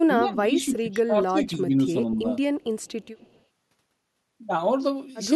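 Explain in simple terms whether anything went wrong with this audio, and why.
Speech suppressed in double talk: the echo canceller likely mistook overlapping talk for echo and turned the speech down, so it dips at 0–0.05 s, 0.25–0.5 s and 0.67–1.96 s.

Echo leak: an echo canceller likely let some loudspeaker sound slip back through, so a faint copy of the speech trails a quarter second behind from 2.8 to 3.43 s.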